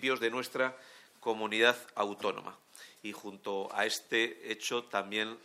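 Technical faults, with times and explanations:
Nothing technical stands out here, and the audio carries on without any problem worth flagging.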